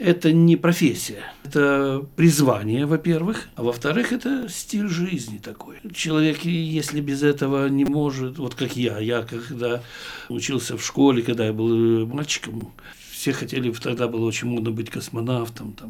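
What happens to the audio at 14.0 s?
At 13.98 s there is a repeated buffer. New audio arrived late, so the device played the last short block two more times, which fits a 256-sample buffer of about 5.3 ms. The same fragment sounds three times in a row with hard joins, heard as a brief click or buzz, and virtually nothing is lost. A waveform shows identical short cycles butted together with steps at each join. A spectrogram shows a thin vertical stripe with faint lines spaced near 188 Hz.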